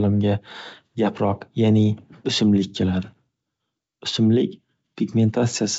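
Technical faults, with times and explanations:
No technical faults are audible anywhere in this speech.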